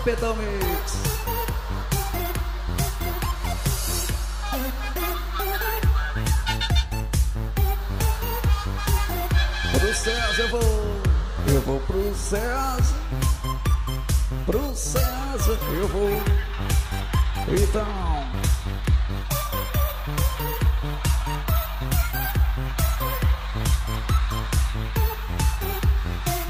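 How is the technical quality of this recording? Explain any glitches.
The technical quality is poor because of one fault. Mains hum runs throughout: a ground loop or nearby transformer couples the 50 Hz power line in, leaving a steady low drone nearly as loud as the sound itself.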